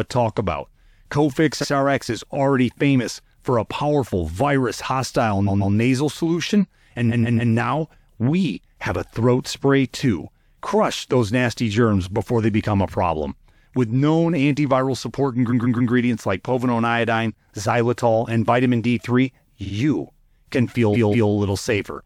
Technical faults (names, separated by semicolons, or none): repeated frames